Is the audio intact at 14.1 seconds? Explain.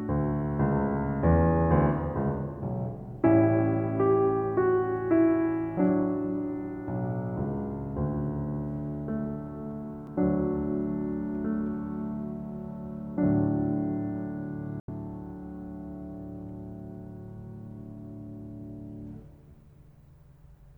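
Yes, the music plays through 14.1 seconds without any audible dropout, glitch or distortion at that moment.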